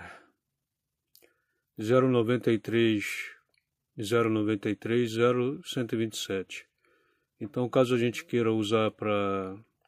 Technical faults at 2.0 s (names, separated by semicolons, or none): none